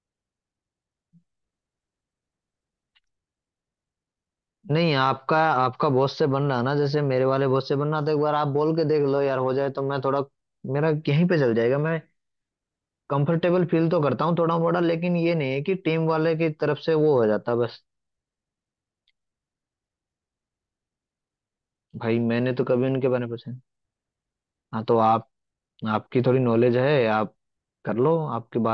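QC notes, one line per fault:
No faults heard on this speech clip.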